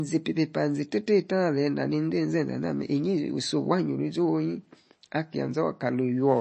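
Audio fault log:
Throughout, MP3 compression: the treble stops dead at about 8.3 kHz, and there's a plainly audible watery, swirly quality to the speech. That's likely a starved MP3 encode. With too few bits, the encoder drops everything above a fixed cut-off and zeroes the weaker frequency lines, which then flicker on and off from frame to frame. The damage fits a low bitrate of around 32 kbps.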